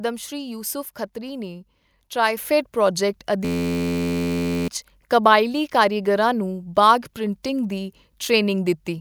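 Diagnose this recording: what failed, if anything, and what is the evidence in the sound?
At 2.37 s there's a microphone volume step-up: the whole signal, speech and room noise alike, jumps by about 6 dB in one instant, with no ramp. That points to the call processing stage. The software's level logic decided the mic was too quiet and raised the device's input volume in a single step rather than riding gain smoothly, so everything the mic picked up got louder together.

From 3.45 s to 4.68 s you get a system hang loop in the driver or buffer stage. A tiny slice of audio, 11.61 ms long, repeats exactly over and over, so instead of speech you hear a steady buzz at about 86.1 Hz. That loop length fits a 512-sample buffer. The machine or driver stalled while the hardware kept replaying the same ring buffer, and roughly a second and a half of real audio never made it through.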